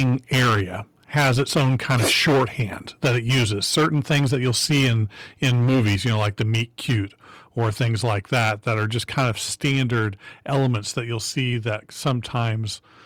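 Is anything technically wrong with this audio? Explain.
Yes. The speech is distorted by microphone overload in three stretches: 0.0 to 0.61 s, 1.15 to 6.96 s, and 7.59 to 12.46 s. The likely cause is an input level set too high, so peaks drive the converter about 13, 16 and 11 dB past full scale. Their tops are sliced flat, giving loud syllables a harsh, crackling edge. On a waveform the peaks form flat plateaus, on roughly a third of samples early on and fewer later. On a spectrogram, dense broadband harmonics smear upward.

There are also three sudden microphone volume step-downs, at 3.05 s, 6.07 s and 9.21 s. Each is a drop of about 2 dB. The likely cause is call software reacting to the overload by lowering the device's input volume in one step. Voice and background fall together instantly rather than fading. On a waveform the envelope shows a clean, abrupt shrink at each moment. On a spectrogram the whole band darkens slightly from that point on, with no change in its shape.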